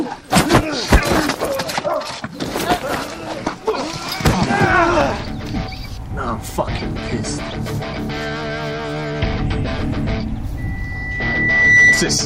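A microphone was picking up the loudspeaker it fed, and at 2 kHz the loop gain passed unity, causing loudspeaker feedback squeal from 10.57 to 12.18 s. A single tone swells over about a second into a piercing whistle, finishing roughly 10 dB above the sound.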